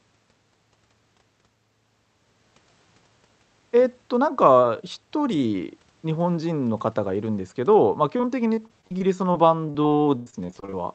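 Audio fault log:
8.17–10.74 s, repeated packet loss (robotic sound): Short dropouts keep arriving over these final seconds, the longest about 99 ms. Each hole is covered by stretching the sound just before it, and the next hole follows soon after. Roughly half a second is patched this way, about a fifth of the span, and a similar amount goes missing. The speech turns choppy, with pieces dropped, on top of a call codec's coding noise and its 8 kHz top end.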